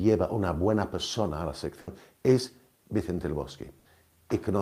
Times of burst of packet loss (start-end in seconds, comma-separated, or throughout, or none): 1.81-1.90, 3.79-3.88